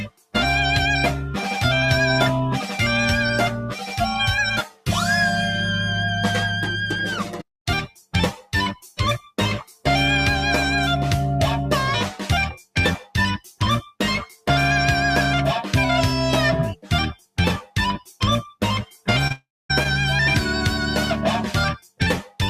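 A speech-tuned noise suppressor was left running on this audio, and it treats sustained material as noise. Held sounds and tails swing down by a few decibels while attacks pass, so the level pumps and thins throughout. In several places the suppressor cuts the sound much harder: 0 to 0.35 s, 3.65 to 4.88 s, 7.2 to 9.86 s, 12.59 to 14.47 s, 16.76 to 19.07 s, and 21.79 s to the end. Drops reach about 13 to 18 dB. Decays are chopped short there. At 19.27 s there is short concealed packet loss. About 20 ms of audio went missing, and the receiver patched it by extending the preceding sound for about 26 ms. The result is a brief smear. Right after, from 19.32 to 19.71 s, the sound carries on as a fading synthetic continuation. About 240 ms of that stretch is silence, and the audio resumes with roughly 380 ms gone. The likely cause is a long network dropout.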